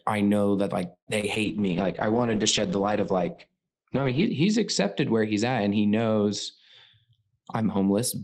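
At 0.93 s the speech stops and a fading continuation of the last sound stands in for it, dropping to about 90 ms of silence before resuming at 1.09 s. This is a call audio freeze, likely from delayed packets draining the jitter buffer. About 134 ms is inserted and nothing is lost, so everything after it runs that much later.

Two short concealed packet losses follow, at 1.21 to 1.25 s and 1.35 to 1.38 s. Each time about 20 ms of audio failed to reach the decoder. The receiver extrapolated from the preceding sound and crossfaded back, which leaves a brief smear or wobble in the speech.

From 1.45 s to 6.97 s there is a call bitrate drop. The encoder target falls from 32 kbps to 10 kbps and the coded bandwidth narrows from 20 kHz to 8 kHz. The speech sounds muffled and rough, and it is coarsest for roughly 2.8 s at the lowest rate.

From 7.09 s to 8.22 s a jitter buffer speed-up trims pitch-period slices to shed excess buffered delay, roughly a tenth of a second in total. 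The speech runs about 9% fast at unchanged pitch and sounds hurried.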